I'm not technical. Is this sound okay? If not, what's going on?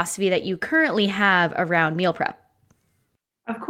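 Yes, nothing in this speech recording points to a technical problem with how the sound was captured or delivered.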